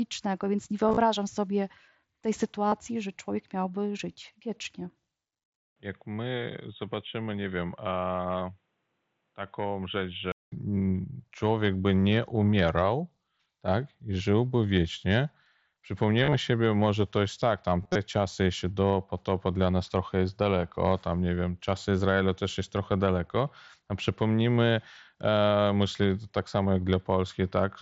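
A speech clip carried over a wideband Bluetooth headset link, with light grain on loud sounds from the mSBC codec. Concealed Bluetooth headset packet loss occurs at 0.88 to 0.97 s, at 2.68 to 2.72 s after "sobie tej", at 16.23 to 16.34 s before "sobie może to jest", and at 17.82 to 17.95 s between "to jest tak tam" and "czasy jeszcze do potopa". Lost stretches were filled by repeating recent waveform, so the longer runs turn briefly buzzy, with runs up to 30 to 38 ms. At 5.56 s the sound drops out for 200 ms. It then turns dull and boxy, with nothing above 3.8 kHz, a level a few decibels lower, and a new faint noise floor. It clears again at 10.52 s. The likely cause is the input switched to a poorer device.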